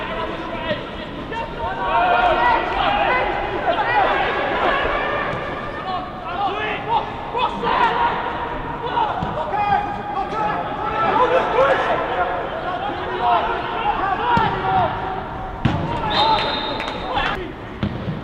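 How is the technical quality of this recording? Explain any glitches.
Hard clipping mars the recording in three places: 2.14 to 2.47 s, 7.81 to 7.84 s, and 11.22 to 11.64 s. In each, the signal briefly exceeds what a stage in the chain can pass, so its peaks are sheared flat, by about 1 dB in the first two and about 3 dB in the last. Those squared-off tops spray harmonics high into the spectrum, heard as a crackly edge on the peaks, roughest around 11.2 s.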